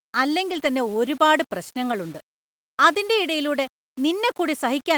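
From start to end the speech sounds grainy, with a gritty edge on quiet stretches and noise roughly 30 dB down. That's likely low bit depth without dither, about 7-bit rounding. At 0.51 to 0.65 s there's no gap, but the sound turns rougher and noisier for about 80 ms. That's a lost packet rebuilt from error correction, fitting four separate packets replaced by their low-bitrate copies. The same thing happens briefly at 1.91 to 1.93 s.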